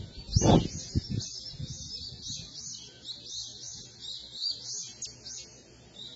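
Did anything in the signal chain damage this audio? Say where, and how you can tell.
Yes. The codec stage did the most harm. Nothing remains above 7.9 kHz, and the whole clip sounds dull, smeared and fizzy. This is heavy damage, likely from AAC compression at a very low bitrate, around 16 kbps. The codec discarded detail it could not afford to code.

There is also audio missing between chunks at 5.02 s. The sound skips forward by roughly a tenth of a second, with no gap of silence. This points to a recorder or processor dropping a short piece while handing over from one chunk to the next.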